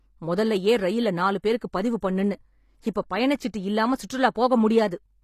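Throughout, the speech has gritty, metallic sibilants and nothing above 15 kHz, likely HE-AAC compression at a low bitrate rebuilding treble by spectral band replication.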